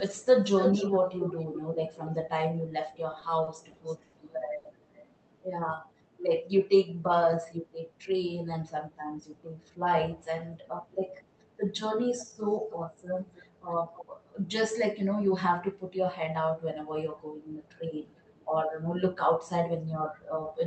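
From 0.0 to 0.26 s, 0.6 to 2.14 s and 2.59 to 5.15 s there is echo leak, most likely a far-end loudspeaker whose echo canceller let part of the pickup return. A delayed copy of the speech trails by roughly 270 to 280 ms. It is loudest from 0.6 s, only about 5 dB under the direct sound, and faint elsewhere.

Inside that stretch, from 3.11 to 4.15 s, packets kept arriving late and the jitter buffer ran dry five times. This produced repeated stalls (stutter). Each gap of up to 50 ms was bridged by extending the last sound, about 130 ms in all, so the speech drags and hiccups without losing anything.

At 4.57 to 4.67 s, a short stall from a late packet held one sound about 80 ms too long while the receiver waited. Nothing is missing, but that moment smears slightly.

From 5.6 to 5.99 s, a jitter buffer slow-down rebuilt the reserve by repeating pitch periods, adding about 55 ms. The speech plays at roughly 88% speed with unchanged pitch and sounds drawn out.

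From 7.92 to 8.74 s, a jitter buffer speed-up trimmed an overfull buffer, cutting roughly 100 ms of pitch periods. The speech runs about 10% fast at the same pitch and sounds briefly hurried.

Echo leak returns at 12.2 to 12.79 s and 13.34 to 14.06 s, now delayed by about 315 ms and sitting roughly 15 to 20 dB down. A last trace at 18.17 to 18.46 s, delayed about 333 ms, sits around 35 dB down.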